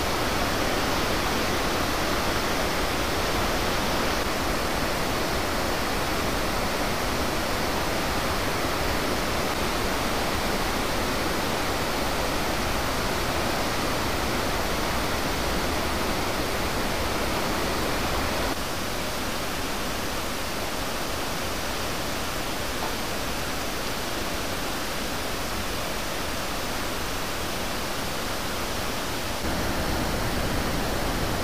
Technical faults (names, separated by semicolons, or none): low bit depth without dither